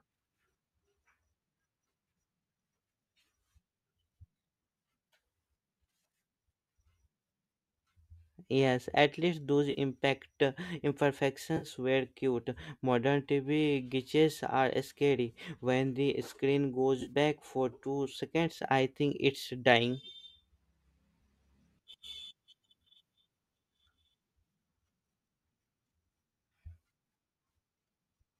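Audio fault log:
9.71–9.78 s, 11.57–11.66 s, 17.01–17.12 s, AAC frame loss with concealment: brief smeared, noisy patches, after "at least those", before "were cute", and between "the screen" and "for two seconds I". The decoder refilled about 40, 50 and 60 ms from the last good spectrum. The last gap is spread over 80 ms, its longest run about 40 ms.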